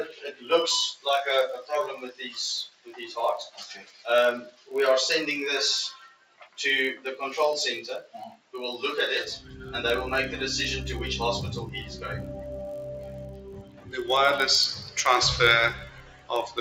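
From start to finish the level swings by around 15 dB as held and fading parts sink while attacks pass, so the sound pumps, flutters or thins out. This is a noise suppressor applied to music or sounds: a speech-oriented suppressor treats steady tones, ambience and tails as noise.

Also throughout, a steady buzz at 46.9 Hz runs under everything. This is a block size mismatch (padded): one stage writes blocks shorter than the next reads, leaving a zero-filled gap in each block. The rate fits 1024-sample reads, and playback runs at 0.999 times speed.

Sound cut by the noise suppressor then drops level in seven spans: 0.05 to 1.06 s (about 13 dB at deepest), 1.62 to 4.71 s (about 16 dB), 5.92 to 7.06 s (about 16 dB), 8.02 to 8.54 s (about 16 dB), 13.04 to 13.93 s (about 13 dB), 14.75 to 14.97 s (about 11 dB) and 15.74 to 16.58 s (about 15 dB). In each span steady or decaying sound sinks or its decay is cut short, while sudden sounds come through. 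The call microphone processing's removal of the lowest bass is expected and is not one of these faults.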